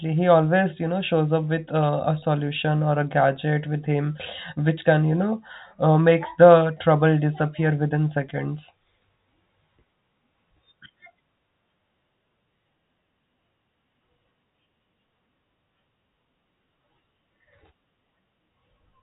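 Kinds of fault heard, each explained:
No faults are heard in this speech.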